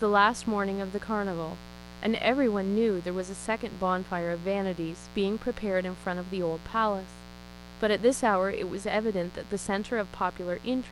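Mains buzz runs through the whole speech clip as a steady, raspy drone roughly 20 dB below the speech. Sharp switching spikes tied to the 60 Hz supply, arriving twice per cycle, leak into the signal path and spread harmonics up into the kilohertz range.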